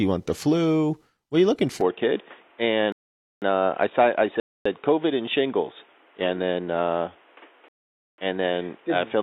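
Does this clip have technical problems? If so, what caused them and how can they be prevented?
Yes. The input switched to a poorer device from 1.81 s, just after "are you looking", to the end. With no gap and no real jump in level, the speech turns dull and boxy: nothing comes through above about 3.7 kHz, and a new background noise sits roughly 30 dB below the voice. The likely cause is the recording system dropping to a narrower-band microphone or a headset's call mode. Locking the input device before recording and disabling automatic switching prevents this.

Rebuffering stalls occur at 2.92 to 3.42 s, 4.40 to 4.66 s and 7.68 to 8.18 s, lasting about 0.5 s, 0.26 s and 0.5 s. Each time the player ran out of downloaded audio, the sound cuts to silence and then resumes exactly where it left off. Nothing is lost, but the pauses stretch the timing unnaturally. A larger playback buffer or a steadier, faster connection prevents these stalls.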